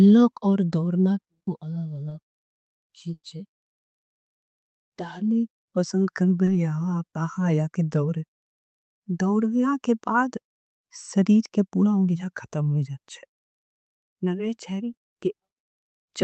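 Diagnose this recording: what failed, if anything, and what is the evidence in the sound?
Short concealed packet loss at 2.09–2.13 s, 6.45–6.49 s and 14.93–14.99 s is a network fault, masked by the receiver. Each event leaves a brief smear or wobble rather than a clean gap: 20 ms was lost in the first two and 40 ms in the third. The decoder bridged each hole by extending the preceding sound, as pitched continuation if voiced or shaped noise if not, then crossfaded back into real audio. The speech runs through a call codec whose top end stops near 8 kHz.

A burst of packet loss from 3.13 to 3.25 s is a longer network dropout of 100 ms. The receiver carried the last sound forward and attenuated it over the gap, so a held buzz or fading hiss decays to 50 ms of silence before the speech resumes. The speech resumes further along than where it broke off, because the 100 ms of sound that was lost is simply absent.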